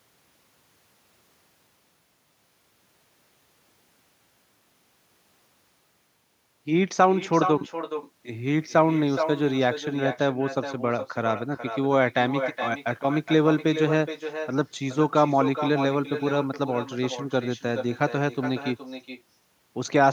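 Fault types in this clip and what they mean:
Echo with no canceller: throughout the speech, each phrase returns about 10 dB quieter and thinner, around 0.4 s later, as far-end loudspeaker sound re-enters the microphone unremoved. Unlike room reverberation, it is a distinct delayed repeat, not a smooth decaying tail.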